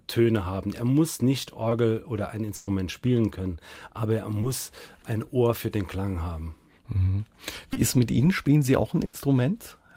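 Short concealed packet loss hits at 1.69 to 1.73 s, 4.41 to 4.45 s after "spielen können aber er", and 7.73 to 7.77 s before "ist mit". About 20 ms went missing each time. The gap was patched from the preceding sound, leaving a brief smear or wobble.

A burst of packet loss runs from 2.55 to 2.69 s, between "oder ein" and "spielen können aber er", and another from 9.05 to 9.15 s. Roughly 120 ms and 80 ms were lost. Each gap is bridged by a fading held buzz or hiss.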